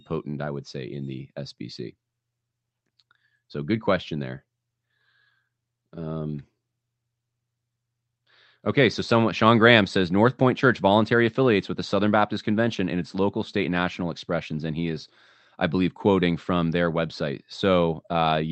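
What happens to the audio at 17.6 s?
Nothing goes wrong at 17.6 s: the speech carries on intact through that moment, still passing through the Opus call path with its top end limited to about 8 kHz.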